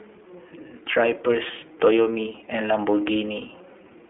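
From start to finish the speech carries iLBC codec damage. Everything above about 3.6 kHz is gone, leaving narrowband telephone sound. Each 30 ms frame is coded on its own, and the excitation is roughly modelled. That makes the voice plainly rough and synthetic. The coding points to a rate near 13 kbps.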